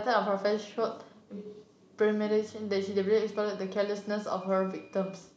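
Nothing stands out here; the speech runs along without any technical fault to point to.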